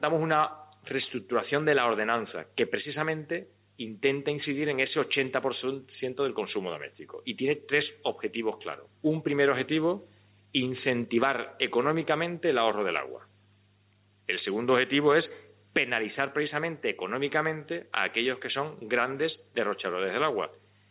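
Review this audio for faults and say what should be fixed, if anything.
Gain pumping runs throughout: input gain was likely set far too high, so a fast limiter drags level down on each loud sound, ducking the background by around 10 dB and letting it swell back in the gaps. The band ending near 4 kHz comes from the G.711 call path and isn't a fault. To prevent the pumping, lower the microphone input gain so peaks stay well below the limiter's threshold.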